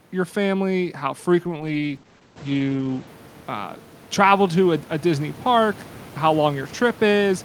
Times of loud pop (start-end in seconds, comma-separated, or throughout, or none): none